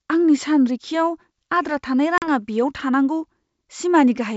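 At 2.18 s, just after "आद्रा थानाय", packet loss on an ADPCM call cuts a hard-edged 40 ms silent gap, roughly a couple of packets. The decoder's predictor and step size drift from the sender's, so the speech resumes slightly distorted, settling by 2.28 s.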